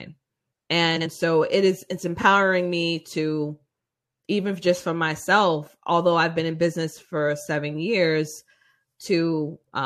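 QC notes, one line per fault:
0.96–1.07 s, frames out of order: two neighbouring blocks of about 46 ms each reached the decoder swapped and were played in that order, so this short stretch of speech runs with its halves exchanged. It comes out as a garbled flutter. No time is lost.
2.19–2.24 s, frames out of order: the same swap on a smaller scale, with two blocks of about 23 ms each, so the flutter is briefer.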